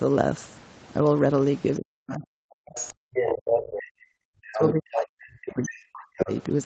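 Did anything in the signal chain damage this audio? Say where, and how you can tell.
Yes. Speech suppressed in double talk appears in call processing. From 1.79 to 6.3 s the talker keeps dipping, about 40 dB at worst, for around four seconds in total. The likely cause is an echo canceller that could not separate the talker from loudspeaker echo. It turned both down.

The other side's voice leaks through, also in call processing. A second voice appears at 2.07, 2.75, 3.17 to 3.8, 4.53, 5.5 and 6.17 s. From 3.17 to 3.8 s it is about as loud as the talker. It is likely loudspeaker echo that the canceller left in the microphone signal.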